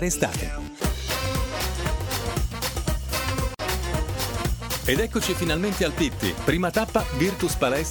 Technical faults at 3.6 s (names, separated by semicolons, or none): gap at a join of encoded pieces